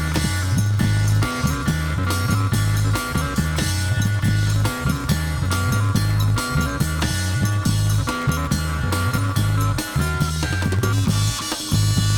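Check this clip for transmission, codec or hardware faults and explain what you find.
There's one fault, and it runs through the whole clip: a block size mismatch (truncated). Blocks that fit 512 samples get their tails chopped off, so you hear a 91.9 Hz buzz, and everything plays 1.07 times fast with its timbre intact.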